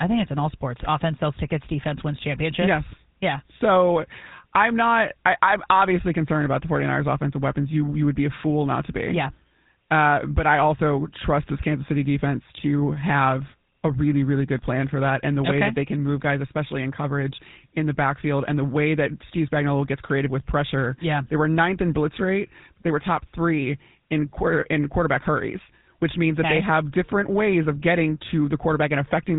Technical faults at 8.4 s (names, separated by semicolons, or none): GSM full-rate codec